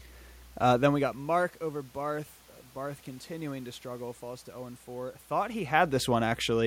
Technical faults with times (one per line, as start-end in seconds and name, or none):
none